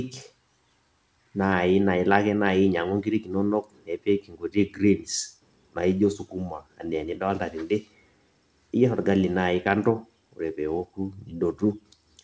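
Nothing goes wrong anywhere in this speech, which just carries the ordinary sound of a call line, with the top end stopping at 8 kHz in a way that fits a wideband codec such as G.722.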